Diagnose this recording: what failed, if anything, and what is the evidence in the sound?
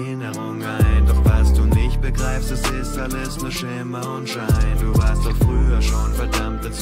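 No fault found in any stage.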